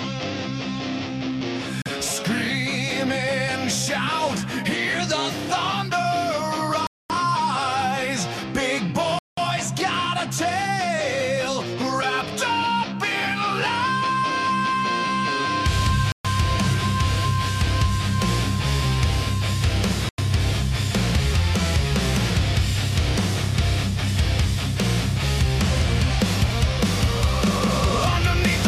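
Stretches of output were replaced by zeros, leaving blocks of digital silence at 1.82, 6.87, 9.19, 16.12 and 20.09 s, each a 40 to 231 ms hole where the sound cuts out and back with no fade.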